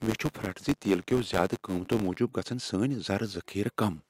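From the start to 2.18 s, a buzz at 93.8 Hz rides on the speech and swells and fades with its level. It is a filter restarted on every block: its state resets at each boundary, so every block opens with a small tick, at a rate that fits a 512-sample buffer.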